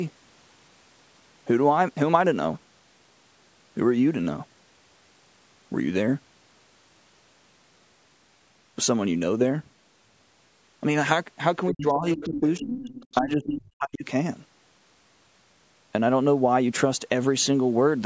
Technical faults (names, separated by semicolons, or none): speech suppressed in double talk; other side's voice leaking through